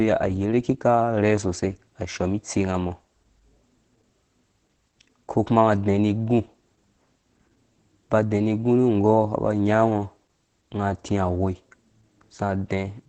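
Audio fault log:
throughout, Opus voice compression: the speech is muffled and slightly hoarse and robotic, with nothing above 8.8 kHz. This fits wideband SILK coding at a bitrate around 12 kbps, where the band is cut off and the excitation is coded coarsely.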